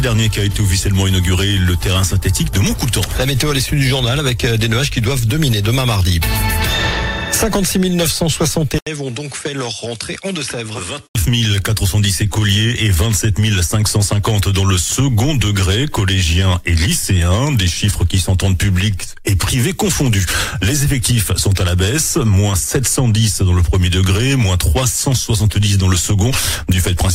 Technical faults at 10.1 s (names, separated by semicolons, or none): input switched to a poorer device